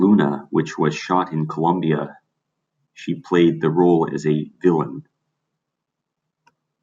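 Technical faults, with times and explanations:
No technical faults can be heard in this speech recording. There is nothing here that calls for a timed entry.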